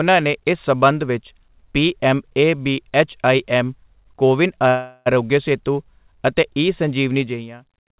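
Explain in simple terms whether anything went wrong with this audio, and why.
A call audio freeze happens from 4.68 to 5.08 s. The speech stops and a fading buzz fills about 0.38 s, then the talking resumes where it left off, with nothing lost. This is likely packets arriving late, so the receiver padded the wait.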